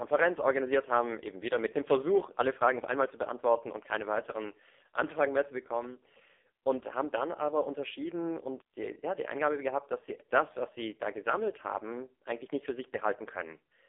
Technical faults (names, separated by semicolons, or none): AMR narrowband mobile codec